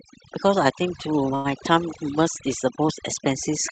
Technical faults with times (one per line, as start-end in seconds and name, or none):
0.00-3.72 overdone noise removal
1.35-1.48 short stall from a late packet